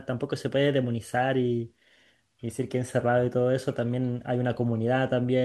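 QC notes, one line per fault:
Nothing to flag on this speech clip, so no fault lines are needed.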